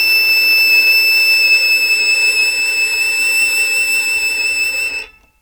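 Music clip, no audible faults.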